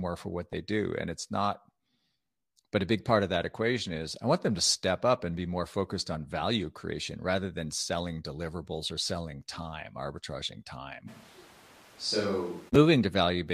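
At 0.53 s, just after "for what" and before "do and it's not", a couple of compressed frames are skipped, losing a few milliseconds. The waveform shows a discontinuity, and the spectrogram shows a vertical mark.

From 11.10 to 12.68 s, right after "selling time arbitraging time", the speech turns hollow and roomy, drops about 5 dB and loses bass, with room noise only about 25 dB below it. This is likely a switch to a distant microphone. The waveform shrinks abruptly, and the spectrogram thins at the bottom with a raised noise floor.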